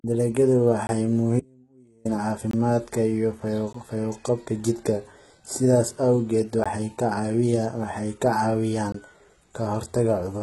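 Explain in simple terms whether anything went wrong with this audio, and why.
Several things went wrong with this speech recording.

First, the recording was most likely squeezed through HE-AAC compression. This kind of compression keeps only the lower part of the sound properly. It then fakes the treble by copying lower sounds upward and roughly reshaping them. The compression here is heavy, and nothing survives above about 11.8 kHz. The result is a treble that is not genuine, so s sounds come out gritty, metallic or lispy.

Second, there are five blocks of digital silence. Each time, a chunk of audio was replaced by silence. The blocks fall at 0.87 to 0.89 s, 2.51 to 2.53 s, 3.73 s, 6.64 s and 8.92 to 8.94 s. Each lasts only about 16 to 21 ms, and the longer ones fit a 1024-sample buffer. The sound stops dead and restarts with no fade each time.

Third, there is an audio dropout to a faint residue from 1.40 to 2.05 s, about two-thirds of a second long. 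The real signal was lost for that stretch, likely from a break somewhere in the connection, while the equipment after the break kept running. The speech cuts out abruptly rather than pausing naturally. During the gap you hear only a very faint trace of sound, far below the normal level, before the speech snaps back.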